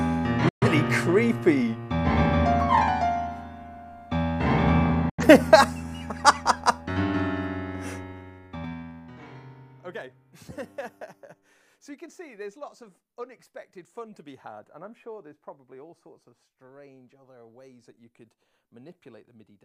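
The audio cuts out twice, with a digital broadcast dropout each time. The first runs from 0.49 to 0.67 s and the second from 5.10 to 5.24 s. Each time the sound fades out within about 3 ms and falls silent. About 128 ms goes missing in the first hole and about 85 ms in the second. That fits a receiver that lost three frames and then two. It muted until good frames came back, so the material sent in those gaps is gone. From 7.99 to 9.42 s there is zipper noise. The level drops by roughly 25 dB, but not smoothly. It falls in 2 dB steps, around ten a second. Each step leaves a small click, so a ticking rides on the sound while the level moves. That points to a gain change applied in coarse increments with no smoothing between them.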